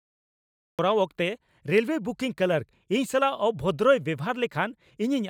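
A cut-off start runs from 0.0 to 0.79 s: the speech capture began late, so the clip opens on digital silence and then jumps straight into a sound already under way at 0.79 s, with no natural attack or fade-in to lead into it.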